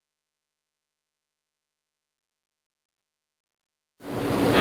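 From 2.17 to 3.05 s, repeated stalls (stutter) insert five held gaps totalling 390 ms, longest 180 ms, as late packets drained the jitter buffer. The spectrogram shows smeared, stretched stripes.

From 3.41 to 3.70 s, a call audio freeze drops to 270 ms of silence, a flat waveform gap, likely from delayed packets emptying the buffer.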